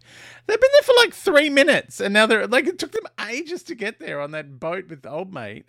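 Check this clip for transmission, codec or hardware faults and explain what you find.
One fault is present, a sudden gain jump. At 2.96 s, right after "they're like it took", the level drops by about 9 dB and stays down until the end of the clip. The likely cause is a digital gain setting or bit shift applied between one sample and the next, with no ramp to ease the change. Because the gain acts on the whole signal, the speech and the background noise fall together in one abrupt step, so the second half sounds suddenly quieter.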